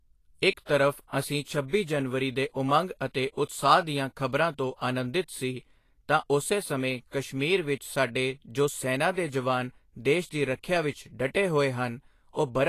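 Throughout the speech, the treble sounds hissy and grainy, tones are roughened, and nothing is heard above about 14.2 kHz. This is likely Vorbis compression at a low bitrate, around 34 kbps, with coarsely quantised high frequencies replaced by noise-like texture.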